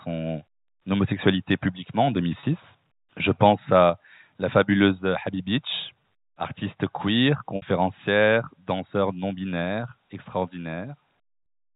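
Packet loss with pitch repetition occurs in this speech clip at 2.4 s, right after "homosexualité publiquement en", at 7.56 s, and at 11.43 s. At each gap the receiver replays the last pitch cycle to fill the hole. The 30 ms gaps at 2.4 s and 11.43 s come out as a brief held, buzzy tone, which fits a single lost packet each time. The 60 ms gap at 7.56 s, about two packets' worth, outlasts the concealment's roughly 50 ms fade, so it sinks toward silence before the speech cross-fades back in. A microphone volume stepped down fault hits at 3.9 s, where the level drops abruptly by about 4 dB, and again at 4.92 s and 7.86 s with smaller steps of about 1 dB each. Voice and background fall together, which likely comes from the call software cutting the device's input volume after judging it too hot. Throughout, the telephone-band G.711 coding keeps everything below 4 kHz.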